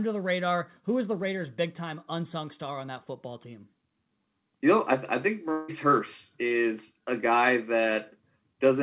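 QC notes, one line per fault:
5.52–5.70 s, long network dropout: right after "I think", about 0.16 s of sound is missing. In its place the preceding sound carries on as a fading buzz or hiss, with no fully silent gap. This is likely audio that never arrived and was extrapolated before speech resumes.
6.48–6.52 s, short concealed packet loss: just before "a guy", about 20 ms of audio reached the decoder too late. The receiver filled it by continuing the previous sound and blending back in, leaving a brief smear within the 4 kHz-limited G.711 band.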